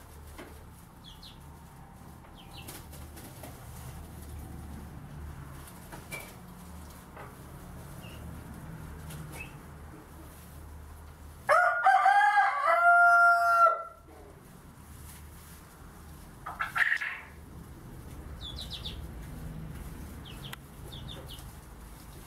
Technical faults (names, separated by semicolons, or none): none